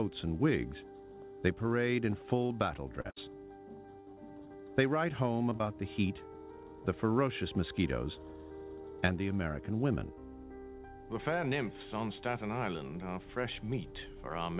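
Choppy, robotic-sounding passages from 2.46 to 4.18 s (six short holes, the longest 60 ms) and again from 5.50 to 5.63 s (three holes) reflect repeated packet loss: each lost packet was patched by extending the preceding sound. The audio is band-limited to 4 kHz, which fits a G.711 call codec.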